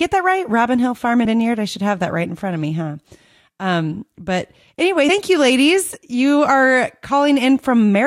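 At 0.37 s a bit error spike, a flipped bit across two samples, gives one sharp broadband tick. At 1.24 s compressed frames are skipped: roughly 70 ms, about four frames, drops out. Another two-sample tick lands at 1.41 s, just before "I should have that". At 5.08 s, between "but anyway" and "you ladies", roughly 70 ms more is skipped.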